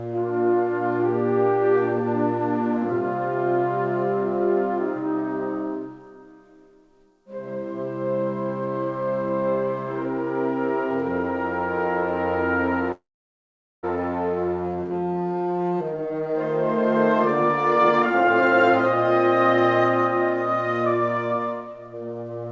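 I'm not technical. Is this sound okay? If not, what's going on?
No, there are two kinds of problem.

From 12.92 to 13.86 s there is a call audio freeze. The sound stalls, briefly carries on as a fading buzz, then goes quiet for most of that stretch before picking up exactly where it stopped. The likely cause is delayed packets leaving the receiver with nothing to play. Unlike a dropout, nothing is lost. About 0.9 s of waiting is added, so everything afterwards arrives a little late.

After that comes jitter buffer speed-up, in three places: 15.93 to 16.38 s, 17.43 to 18.73 s, and 20.94 s to the end. To catch up on the delay, the receiver snips out tiny slices of sound, so these parts rush along. The first is very hurried, nearly double speed, and the later two are less extreme but still noticeably quick, about a fifth and a tenth faster. Unlike a tape played fast, the pitch stays the same. 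Only the pace changes.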